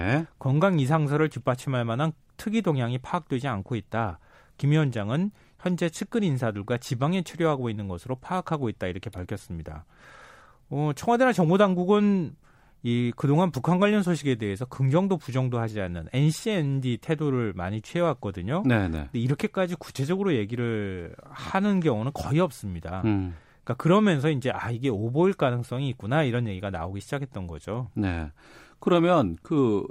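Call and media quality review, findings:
No faults found in the speech signal; levels, continuity and timing show nothing requiring action in this review.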